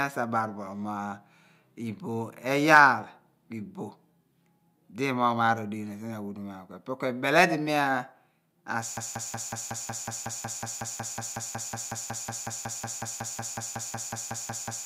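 From 8.97 s to the end, the speech falls into a broken-record loop: a 184 ms fragment repeats back to back, likely from a stalled player or stream, replacing the remaining audio.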